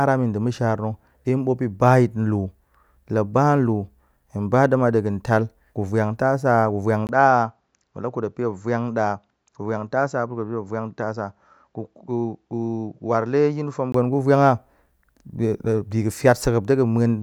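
At 7.07 s the speech turns duller and about 5 dB quieter, after a brief gap of about 20 ms. Nothing above 7.6 kHz survives, and a faint new noise floor appears. This is likely an input switched to a poorer device. Full clarity returns at 13.94 s.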